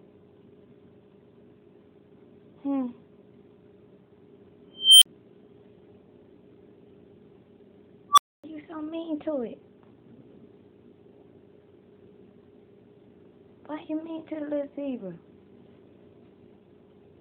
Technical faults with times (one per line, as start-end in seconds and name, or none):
4.74-5.06 unstable filter
8.10-8.44 unstable filter